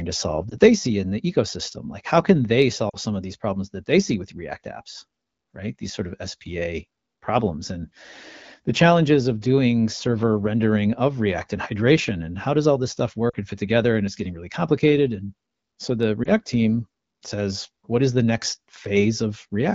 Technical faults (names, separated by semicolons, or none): lost AMR speech frames